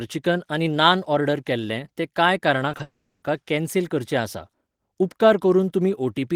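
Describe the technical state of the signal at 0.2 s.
The audio is intact at 0.2 s, with no audible fault in the signal at that moment.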